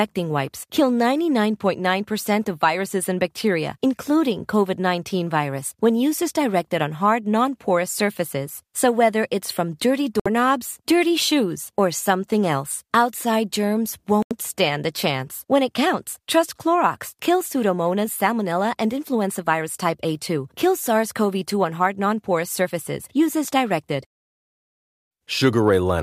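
At 10.20 s, right after "whether it's from dirty", the speech drops to silence for about 61 ms and resumes with "dirty shoes or something". At 14.23 s, after "something else outside germs", a second gap of about 84 ms opens before "stand a chance". Both are a Bluetooth stall, likely caused by interference delaying packets so the headphone buffer emptied and playback paused until the resent data arrived.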